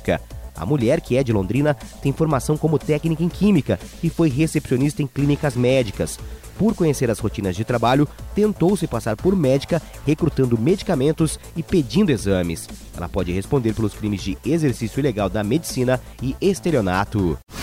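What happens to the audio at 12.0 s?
Nothing goes wrong at 12.0 s; the audio plays through that moment intact, with no dropout, click or distortion.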